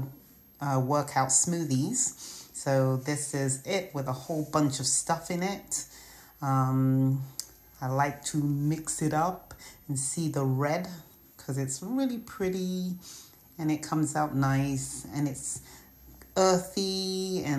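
A switching supply whistle runs throughout, wandering between 12.4 and 13.1 kHz roughly 30 dB below the audio; its drifting pitch sets it apart from a fixed interference tone.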